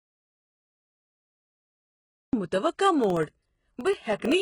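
From the very start until 2.33 s there's dead digital silence with no room tone, likely an audio dropout to silence where the input was lost and silence got recorded. Throughout, the treble is gritty and metallic, with nothing above 11.1 kHz, which points to heavy HE-AAC compression at a low rate, something like 12 kbps. Then from 3.04 to 4.32 s come periodic USB or driver dropouts: around twenty tiny gaps of roughly half a millisecond, every 64 ms, heard as steady ticks.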